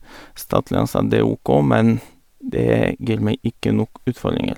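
No technical faults can be heard in this recording.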